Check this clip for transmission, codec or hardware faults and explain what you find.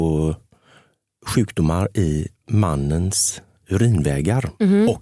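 No faults can be heard anywhere in the speech. There is nothing to report at any point in the clip.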